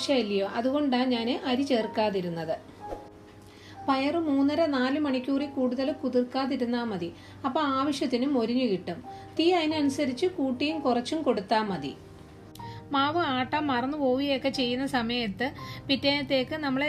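Nothing here stands out as a technical fault; the audio runs along without any glitch, dropout or distortion to point to.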